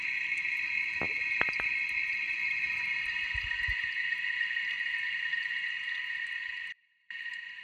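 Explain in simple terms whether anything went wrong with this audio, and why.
Near the end, from 6.72 to 7.10 seconds, the sound suddenly drops away for about 0.38 seconds and then snaps back. The gap isn't silent: a faint trace of the sound carries on underneath, far quieter than normal. This is an audio dropout to a faint residue. The wanted signal was most likely lost for a moment while the recording path stayed switched on, so only that weak leak got through. The abrupt cut and return is what separates it from a natural pause or fade.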